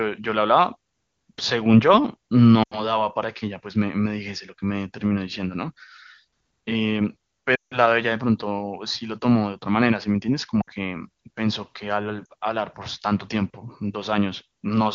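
Brief warbles and dips, then a quick drop to near silence, at 2.63–3.01, 7.55–7.78 (longest), 10.62–10.70 and 12.26–12.32 s. These are lost AMR speech frames: the wideband decoder stretched the last good frame with falling gain.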